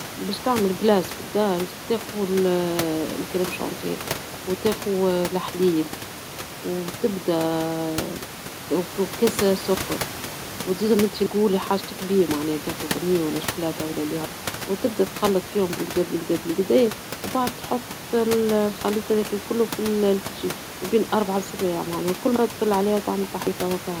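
At 9.39 s, 12.97 s and 23.47 s, the speech skips ahead. About a tenth of a second is missing each time, with no gap. The second comes between "حاجتك بيهم معناها تأخذ" and "ولا شوكولاطة". This is likely a dropped buffer (overrun), where samples were overwritten before being read.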